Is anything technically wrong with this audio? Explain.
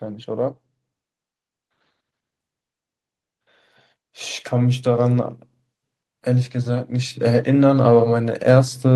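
Yes. From 6.23 s to the end at 8.95 s, automatic gain rising occurs: the gain control judged the input too quiet and steadily raised its gain, so the speech and background swell up together.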